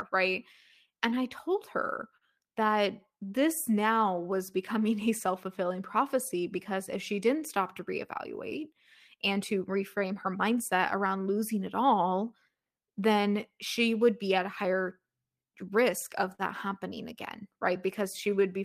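Speech, marred throughout by clock drift between sender and receiver: the sender's clock runs roughly 3% slow, so the receiver's jitter buffer keeps draining. Repeated timing corrections from 0.17 s to 18.41 s repeat small pieces, stretching playback to 98% speed and adding roughly 0.4 s; on a waveform these show as faintly duplicated cycles and an unsteady tempo. A short stall from a late packet occurs at 2.17–2.24 s (43 ms held) and again at 16.35–16.42 s (40 ms), where the buffer ran dry; a spectrogram shows the last sound frozen into flat horizontal bands with a slight dip before the audio resumes where it left off. Scattered short gaps between 6.28 s and 7.43 s, about three of them of around 10 ms each, were patched by continuing the preceding sound and appear as tiny smeared vertical seams or ticks.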